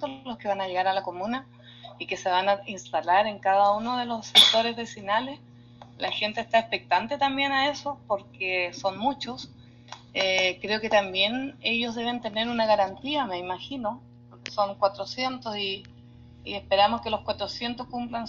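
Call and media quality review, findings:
Mains hum, full clip: steady low drone at 60 Hz with some low harmonics, sitting about 25 dB under programme. Probable cause: ground loop or nearby transformer coupling power-line current into the analogue path ahead of capture.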